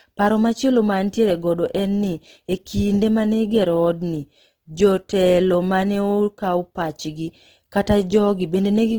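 Opus compression runs throughout, likely in CELT mode at a bitrate near 16 kbps. Each band keeps its energy, but under-funded bands get folded or noise fill, so the speech sounds plainly grainy and rough rather than swirly, while extending to about 20.4 kHz.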